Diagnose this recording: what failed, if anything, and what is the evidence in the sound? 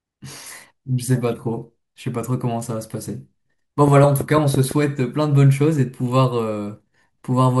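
A train of clicks runs from 3.88 to 4.72 s: about seven similar ticks at a steady 6 per second, peaking roughly 10 dB above the speech. A spectrogram shows evenly spaced thin broadband vertical lines, and the waveform shows isolated spikes. The likely cause is interference in the analogue wiring or a faulty connection or power supply.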